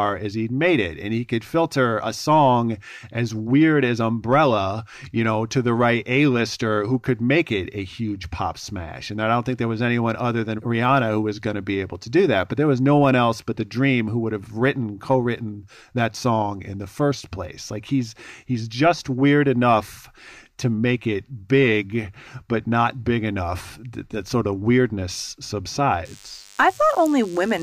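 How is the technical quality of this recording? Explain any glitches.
There's one clear glitch: DECT cordless phone buzz from 26.05 s to the end. A nearby DECT unit's 100 Hz bursts get rectified, giving a thin, harmonic-rich buzz well below the speech.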